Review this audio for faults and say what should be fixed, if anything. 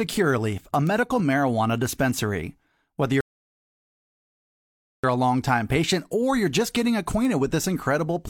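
There are two bit error spikes in this speech, one at 0.87 s, just before "marijuana dispensary", and another at 7.25 s, right after "or you're just getting". Each is a single sample where one flipped bit threw the value off by a power of two before it snapped straight back. You hear a lone sharp tick that isn't related to the voice at all. Fixing it at the source means putting error checking on the storage or link, like ECC memory or checksummed transfers.

There's also a rebuffering stall from 3.21 s to 5.04 s, just before "a longtime patient or". The player ran dry on downloaded audio and went silent until more arrived, then picked up exactly where it left off. Nothing's missing, but about 1.83 s of dead air got stuck into the middle of the speech. A bigger playback buffer or a steadier delivery connection would keep this from happening again.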